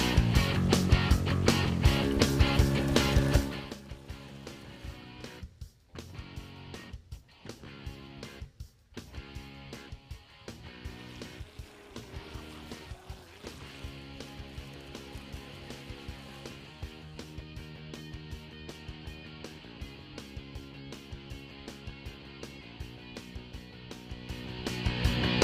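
Nothing here sounds technically wrong to my ears, so there's no fault to point to.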